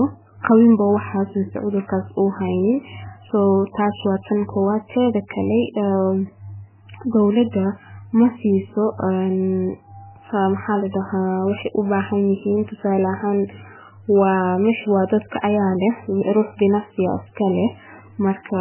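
Throughout the speech, heavy MP3 compression is likely at work: nothing above 3.1 kHz, watery swirling sibilants, and a spectrogram showing a hard ceiling with flickering patches, consistent with about 8 kbps.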